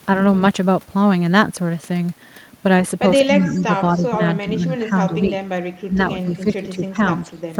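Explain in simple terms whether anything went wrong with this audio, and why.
Something went wrong with the echo handling on this call, likely because both sides spoke at the same time. That is speech suppressed in double talk: the echo canceller couldn't tell this talker apart from the loudspeaker echo, so it turned the speech down. The speech dips at 3.26–3.7, 3.94–4.2, 4.42–5.44, 5.86–5.98, 6.15–6.97 and 7.23–7.3 seconds.

There is also a brief echo leak, likely from a speakerphone whose echo canceller missed part of what its microphone picked up. From 3.57 to 3.61 seconds, a very faint copy of the speech comes back about a quarter of a second late.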